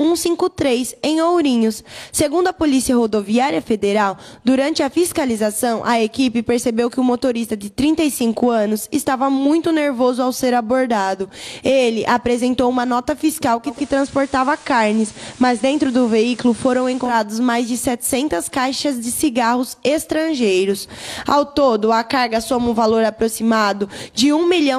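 From 13.65 s to 17.16 s the audio picks up a steady hiss roughly 25 dB below the signal and shifts in level by about 1 dB, with a 160 ms cross-fade at each end: digital radio blending to analogue, where the receiver dropped to the station's FM broadcast and later returned.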